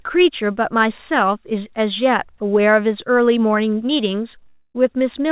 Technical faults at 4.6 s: long network dropout

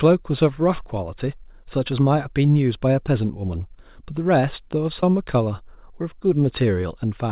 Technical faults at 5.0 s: short concealed packet loss

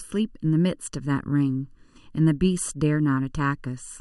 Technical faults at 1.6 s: channel delay (comb filtering)

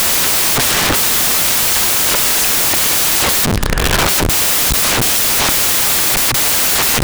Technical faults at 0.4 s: samples built from the wrong bytes

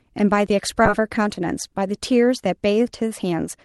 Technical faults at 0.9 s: skip ahead

